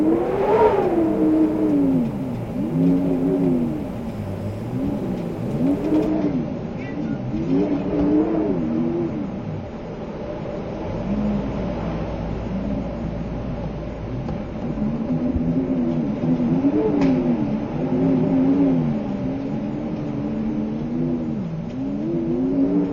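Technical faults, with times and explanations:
6.07 to 22.9 s, adaptive stream at a lower bitrate: the sound abruptly loses treble with no gap, nothing remaining above about 6.9 kHz, as the stream drops to a leaner encoding, which fits a step from around 96 to 24 kbit/s. A spectrogram shows a hard ceiling appearing at 6.07 s, with smeared, blotchy upper bands below it.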